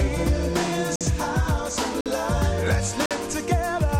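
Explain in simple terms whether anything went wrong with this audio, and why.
There's a gap between chunks problem here: the audio cuts to silence for 50 ms at 0.96, 2.01 and 3.06 s, once every second. It was handled in one-second pieces, and a hole opens at each join, though no sound is missing.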